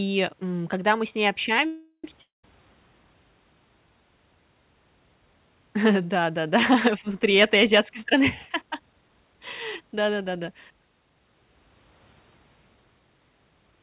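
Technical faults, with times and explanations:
1.66–2.05 s, call audio freeze: after "когда мы с ней" the last sound stretches into a fading buzz, then brief silence; speech resumes where it stopped, nothing lost, likely a stalled jitter buffer.
2.22–2.44 s, long network dropout: again after "когда мы с ней", a fading buzz turns to silence, and speech returns about 220 ms further on, skipping that stretch.
7.31–9.35 s and 9.80–10.71 s, jitter buffer speed-up: speech runs hurried at 114% then 109% as pitch-period slices are cut, roughly 0.3 s and 0.1 s in total, yet pitch stays unchanged.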